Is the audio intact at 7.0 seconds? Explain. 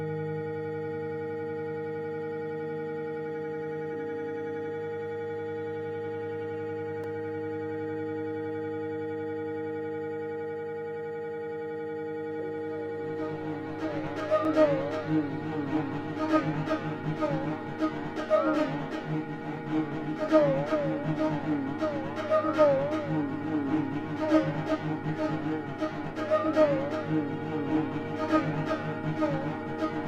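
No. At 7.04 s there is a block of digital silence about 2.7 ms long, which fits a 128-sample buffer the program didn't fill in time. The sound drops out and returns with no fade, so the gap is heard as a tick or dip.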